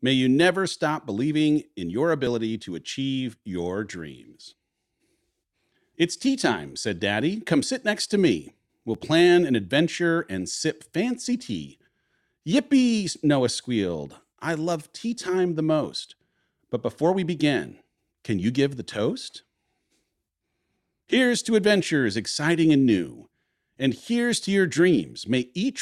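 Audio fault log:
0.73 s, 2.27 s and 8.95 s, dropped buffer (overrun): each is the speech jumping forward with no gap, as roughly 15, 10 and 5 ms go missing. Likely the samples were overwritten before being read, so the two edges are joined directly.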